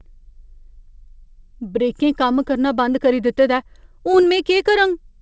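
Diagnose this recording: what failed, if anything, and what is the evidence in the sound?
What failed is the network: there's a short concealed packet loss at 4.12 to 4.15 s. About 20 ms of audio never arrived in time, so the decoder stretched the preceding sound to bridge it, then crossfaded back. You hear a brief smear in content that's already capped at 8 kHz, which fits G.722.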